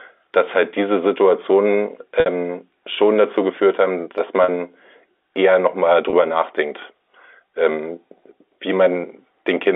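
Packet loss with pitch repetition occurs at 2.20–2.26 s (before "schon dazu geführt haben"), 4.44–4.48 s (after "dazu geführt haben dass") and 6.10–6.13 s (after "eher nochmal"). Receivers bridged the 60, 40 and 30 ms gaps by repeating the last pitch period, heard as brief held buzzes.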